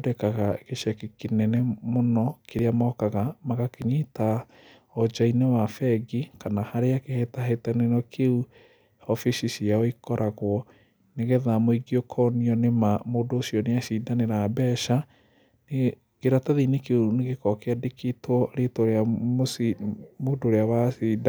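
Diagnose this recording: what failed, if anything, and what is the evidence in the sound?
Two jumps in the speech, at 2.59 s and 3.82 s, each a tiny forward skip with no gap of silence. That's likely a dropped buffer (overrun) at the driver or buffer stage: samples got overwritten before being read, losing roughly 10 ms each time and splicing the edges together.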